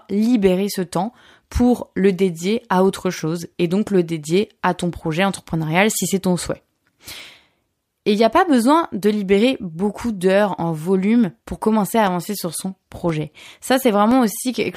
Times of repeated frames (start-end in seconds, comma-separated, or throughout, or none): none